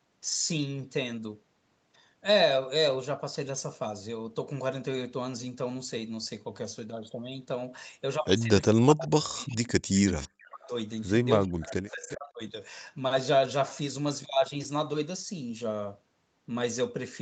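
From 8.72 to 10.72 s, and again from 11.44 to 12.41 s, the speech dips by up to about 40 dB and breaks up, likely speech suppressed in double talk as the canceller ducks everything. Short echo leak scraps show up at 9.48 s, 9.96 to 10.27 s and 12.09 s. These are faint copies about 20 to 25 dB down, arriving 367 ms late, likely loudspeaker echo the canceller didn't fully remove.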